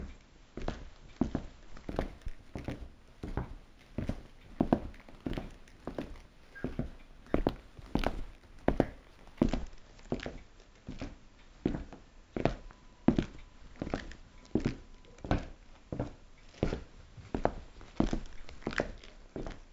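From 1.89 s to 9.44 s there is imaging from linear upsampling. The content just below 8 kHz is dulled, and a faint mirror copy of the band appears from 8 to 16 kHz, roughly 40 dB below the main signal, heard as a light metallic shimmer on bright, hissy detail. This fits audio at 16 kHz raised to 44.1 kHz by straight-line interpolation, which filters out little of the folded spectrum. On a spectrogram, the lower band shows reflected faintly above 8 kHz.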